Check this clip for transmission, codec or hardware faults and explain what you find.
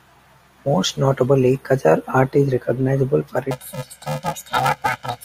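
One fault affects the end of this speech clip. From 3.51 s, after "art is recognizable for", to the end, planar audio is read as interleaved. Blocks of about 2.67 ms, which fits 128-sample blocks, each replay at double speed, left then right. The speech becomes a robotic 375 Hz buzz.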